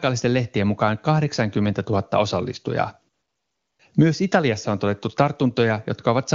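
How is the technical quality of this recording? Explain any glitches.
The recording has one glitch, a short patch of AMR comfort noise in the middle. The speech runs over a wideband AMR (HD Voice) path, and its clarity fits that codec's top rate of 23.85 kbit/s.

AMR comfort noise, 3.13 to 3.79 s: for these 0.66 s the sending phone treated the talker as silent and stopped transmitting speech frames. The receiving end filled the gap with noise it generated itself, shaped only by a rough description of the background's level and spectrum. The real background sound is replaced by a steady, smooth hiss that switches in at 3.13 s and out again at 3.79 s.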